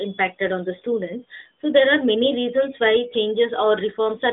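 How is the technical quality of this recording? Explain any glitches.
No glitches or faults heard.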